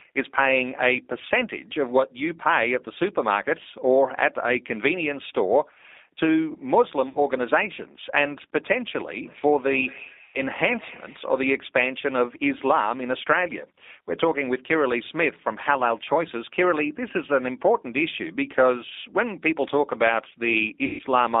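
A G.729 codec at 8 kbit/s carries the whole clip. It rebuilds the speech from a short-term vocal tract filter, a pitch predictor and a handful of pulses per frame rather than sending the waveform itself. The line band runs only from about 250 Hz to 3.7 kHz, so the sound is thin and boxy. The coding damage is plainly audible as a rough, slightly synthetic buzz in the voice.

At 7.09 to 7.19 s, 60 ms of packets go missing, which fits three 20 ms packets. VoIP packet loss concealed by the speech codec fills the gap: the decoder extends its last pitch and filter settings at falling gain. Two longer losses follow, 100 ms at 10.24 to 10.42 s and 140 ms at 20.85 to 21.02 s. Each gap becomes a stretched, buzzy tone or coloured noise that fades. The voice stays weak and smeared for a moment afterwards while the decoder's state rebuilds.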